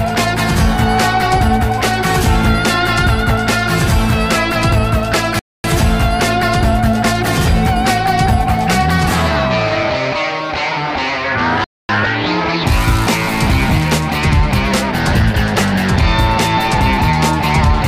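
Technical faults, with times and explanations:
5.39 to 5.64 s and 11.64 to 11.89 s, gap between chunks: the audio arrives in pieces about 6 s long, and at each join the playback stops for 250 ms before the next piece begins. Both holes are silence. Nothing is missing from the sound itself. The flow simply halts and resumes, so the breaks land at a steady spacing set by the chunk length, not by anything in the content.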